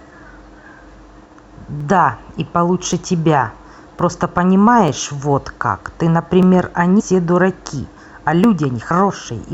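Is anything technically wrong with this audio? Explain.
Yes. The speech has two kinds of fault.

Single sharp clicks occur at 1.80, 2.93, 3.99, 4.88, 6.43 and 8.44 s. Each is likely dropped samples, where less than a millisecond of audio goes missing. The waveform jumps straight to a later value. No sound is lost, but the jump clicks.

At 8.90 s the speech leaps forward by about 150 ms. This is compressed frames skipped. Frames of encoded audio were never played, and the gap fits about seven frames of 23.2 ms.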